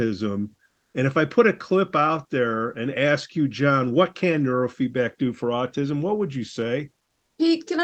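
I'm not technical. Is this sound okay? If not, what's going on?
No. From about 0.65 to 0.93 seconds, a bit under a third of a second, the real background drops out. A smooth, even hiss takes its place, and it is a little quieter than the room around it. That is comfort noise in place of the background. The likely cause is the call software pausing its sending while nobody talks. Your end then fills the gap with made-up noise until the speech comes back.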